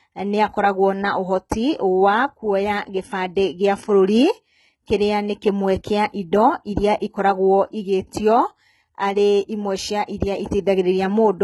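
From start to finish the speech shows heavy codec damage consistent with HE-AAC compression, likely at a very low bitrate near 16 kbps. The upper band is not coded directly but rebuilt by copying lower-frequency content upward under a coarse envelope, so the treble keeps its brightness but no longer matches the real harmonics. Sibilants come across gritty and metallic or lispy, and nothing remains above about 11.8 kHz.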